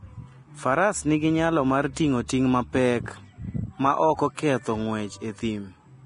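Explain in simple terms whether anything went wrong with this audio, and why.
Yes, something's off, and it runs through the whole clip rather than hitting at one moment. The speech has a hissy, grainy quality, the edges of sounds come across smeared, and nothing sits above about 10.6 kHz, so the top end feels chopped off. That's likely heavy Vorbis compression at a low quality setting: the encoder trimmed the highest frequencies and coded the remaining treble so roughly that the fine detail turned into noisy fizz.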